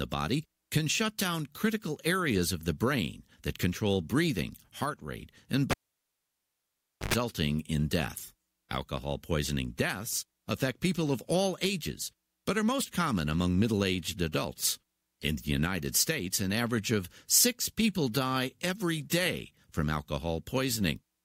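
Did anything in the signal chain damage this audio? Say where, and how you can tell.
Yes: analogue wiring. After "breathing heart rate and", a cable pulled and plugged in at 5.71 s gives a pop, 1.4 s of silence, then 50 Hz buzz and a pop before "in death" at 7.14 s. That brief mains buzz marks a physical plug, not a dropout.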